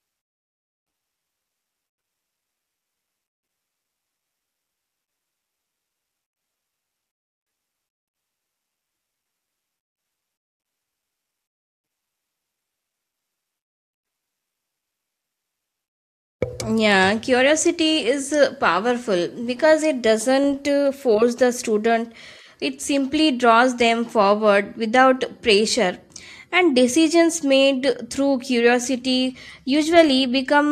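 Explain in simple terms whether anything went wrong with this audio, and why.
Nothing went wrong here: the speech comes through with no dropouts, clicks, distortion or other audible faults anywhere in the recording.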